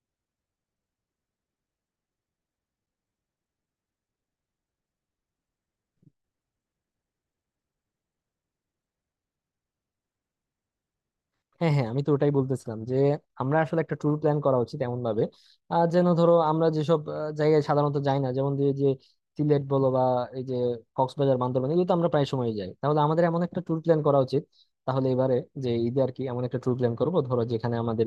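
No technical faults can be heard anywhere in the recording.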